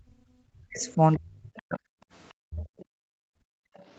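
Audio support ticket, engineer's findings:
Speech suppressed in double talk, 0.0–1.8 s (roughly 1.5 s affected, dipping as much as around 40 dB) and 2.49–2.66 s (around 25 dB). Likely the echo canceller hitting double talk: both ends talking, it couldn't separate near talker from loudspeaker echo, so it ducked everything.

Other side's voice leaking through at 0.8–1.19 s, 1.56 s, 2.57–2.84 s and 3.74–3.84 s, faint scraps, roughly 30 dB under the talker, the last one fainter still. Likely residual echo: far-end loudspeaker audio the canceller didn't fully strip from the mic.

Background gated by the echo canceller at 2.08–2.12 s (about 20 dB) and 2.94–3.74 s (about 35 dB, a 700 ms hole). Room tone drops out while the loudspeaker plays, then comes back once the canceller releases the mic.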